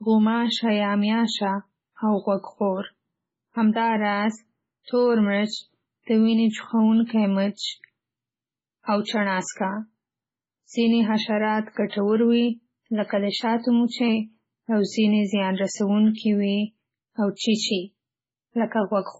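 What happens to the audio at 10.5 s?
At 10.5 s the speech sounds watery and swirly with nothing above 7.7 kHz, as throughout, likely heavy MP3 compression, consistent with roughly 16 kbps, dropping treble and weak frequency lines.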